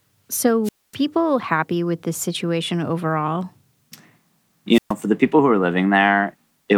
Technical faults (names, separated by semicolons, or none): wireless microphone squelch dropout